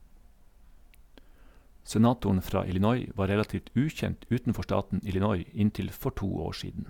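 No technical faults can be heard anywhere in the recording.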